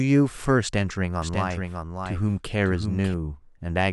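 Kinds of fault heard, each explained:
Doubled audio track: From 1.22 s to 3.14 s the speech is shadowed by a second, full-band copy trailing about 0.7 s behind and sitting about 5 dB quieter, so each phrase is heard again over the next one. The repeat carries no reverb tail or room colour and cuts in and out abruptly at those edges. Two out-of-step copies were likely mixed together, either from a slower capture path recording the same sound again or from an edit.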